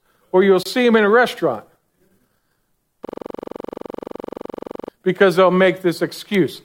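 From 3.05 to 4.89 s, before "because they'll", a system hang loop: the system froze while one 42.67 ms buffer (which fits 2048 samples) repeated at 23.4 Hz, a rough buzz.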